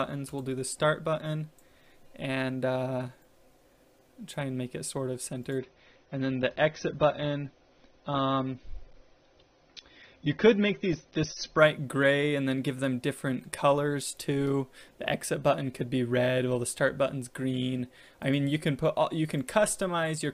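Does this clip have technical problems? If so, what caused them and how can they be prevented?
Yes. An adaptive stream at a lower bitrate is audible from 5.58 s to 11.58 s. For those six seconds the sound abruptly loses its top end, with nothing above about 6.3 kHz, and compression artefacts become more prominent. Full quality returns just as suddenly, and the audio never drops out. This pattern is typical of a streaming player switching to a much leaner encoding when throughput falls, consistent with a drop from around 96 to 24 kbit/s AAC. To prevent it, provide steadier bandwidth or a larger playback buffer, or raise the stream's minimum bitrate so the player never falls back that far.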